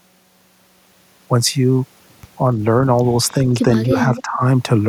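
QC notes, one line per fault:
3.83–4.22 s, echo leak: a faint delayed copy of the speech, trailing about 284 ms behind and sitting roughly 15 dB under it, sneaks in. That's likely a far-end loudspeaker echo the canceller didn't fully remove, so it came back down the line.
3.89–4.42 s, speech suppressed in double talk: the talker dips by up to roughly 10 dB, around 0.4 s of it affected in patches. Likely the canceller couldn't separate talker from echo while both overlapped, so it pulled the whole lot down.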